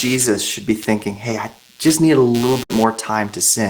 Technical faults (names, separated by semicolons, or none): computer activity noise; burst of packet loss